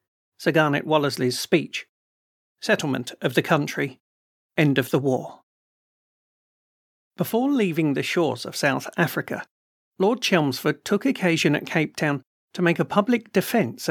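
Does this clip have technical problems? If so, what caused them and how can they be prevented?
No, no technical faults here.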